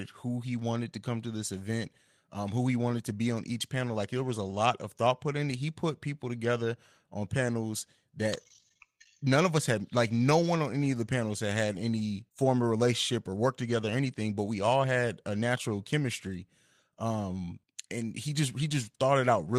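Speech, with a brief rough, noisy stretch from 14.11 to 14.17 s: a lost packet rebuilt from error correction, where the decoder played low-bitrate copies from following packets, about 40 ms, which fits two lost packets.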